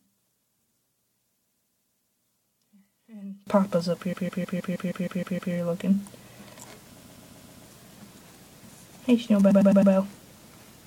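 From the start to 3.47 s the whole sound, background included, drops by about 28 dB and what's left is just the mismatch between the two sides. That's the signature of one channel inverted: the common content cancelled when the stereo was folded to mono, likely because one side had its polarity flipped.

Then there are four patches of repeated frames, where the same short chunk of compressed audio plays over and over, so you hear a stutter:
From 1.4 s to 2.18 s, a 157 ms block loops five extra times, adding 0.78 s. That fits a run of about six frames.
From 4.12 s to 5.53 s, the same-sized block repeats nine extra times, adding 1.41 s.
From 6.99 s to 7.64 s, a 131 ms block repeats five extra times, adding 0.65 s.
From 9.5 s to 9.92 s, a 105 ms block repeats four extra times, adding 0.42 s.

Together that pads the clip by about 3.27 s.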